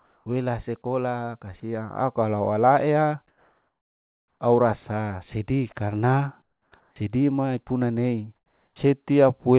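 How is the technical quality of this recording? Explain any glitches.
The recording has a recurring glitch in its pauses: the background between phrases is repeatedly replaced by a flat synthetic hiss. The audio is band-limited with nothing above 4 kHz, which fits a narrowband call codec.

Comfort noise in place of the background occurs at 0.00–0.26 s, 3.28–4.40 s, 6.42–6.72 s, 6.80–6.96 s and 8.36–8.76 s. The likely cause is discontinuous transmission. The sender stops sending when it detects silence, and the receiver fills each gap with generated noise that only approximates the background's overall spectrum. In these spans the natural texture gives way to a steady, featureless noise. It is about 2, 3, 9, 0 and 6 dB quieter, respectively, than the real background, so the level steps down in most gaps.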